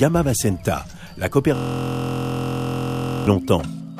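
From 1.55 s to 3.27 s there's a system hang loop: the system froze while the hardware kept replaying one 23.22 ms chunk, which fits a 1024-sample buffer. It repeats 74 times, so you hear a steady buzz at about 43.1 Hz.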